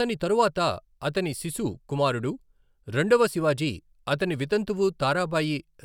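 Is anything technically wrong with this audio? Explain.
No, nothing technically wrong can be heard here.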